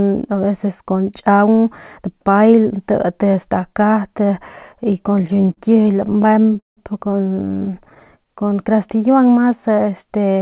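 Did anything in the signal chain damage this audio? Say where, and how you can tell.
Yes. Repeated stalls (stutter) in the network and jitter buffer stage damage the speech from 5.18 to 6.79 s, with about 26 gaps. The longest, about 173 ms, is stretched and faded, and roughly 28% of the span is concealed. A second burst runs from 7.45 to 8.07 s, with 12 short gaps of at most 13 ms. Packet loss would drop sound, but here nothing is missing. The receiver keeps extending the last sound while late packets arrive, so the speech drags and stutters.

A jitter buffer slow-down follows from 8.18 to 8.96 s. The buffer, running low or having just raised its target delay, repeats single pitch periods to build up its reserve. Delivery runs at about 90% speed and the stretch gains about 84 ms. A clock or tape-speed fault would drop the pitch, but here pitch holds steady, which points to the buffer. The G.711 call path's 4 kHz ceiling holds throughout.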